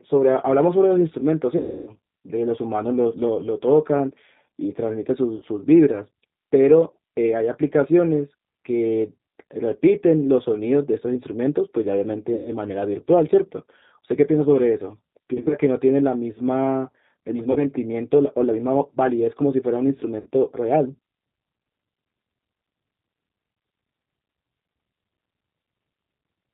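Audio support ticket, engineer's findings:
G.729 codec, throughout: band-limited, slightly rough, synthetic timbre; no content above 4 kHz. 8 kbit/s CELP coder rebuilds speech from vocal-tract filter, pitch predictor and sparse pulses per 10 ms frame, hence plainly audible coding damage.

VoIP packet loss concealed by the speech codec: 1.57–1.93 s (300 ms lost), 5.36–5.45 s (60 ms), 12.34–12.52 s (120 ms), 15.34–15.56 s (100 ms scattered over 160 ms, longest run 40 ms), 17.52–17.66 s (40 ms), 20.20–20.29 s (60 ms). Decoder extrapolates last pitch and filter with falling gain, producing a fading buzzy or noisy smear and weak recovery afterwards. Gap sizes point to 20 ms packets.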